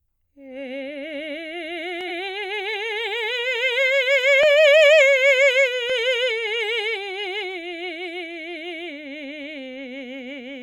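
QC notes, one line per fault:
2.07–2.10 s, compressed frames skipped: the music lurches forward, as if a sliver of the passage had been snipped out. About a tenth of a second of audio never plays, which fits two whole frames of 46.4 ms each being missing or rejected as damaged by the decoder.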